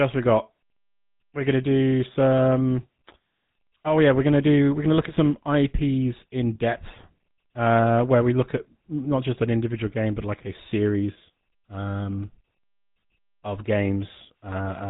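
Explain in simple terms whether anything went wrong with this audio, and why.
GSM full-rate codec, from start to finish: the speech went through an early mobile-phone codec that rebuilds the voice from a simple model of the throat and mouth, fed by evenly spaced pulses. This gives a plainly audible buzzy, gravelly roughness, and nothing above 3.8 kHz survives.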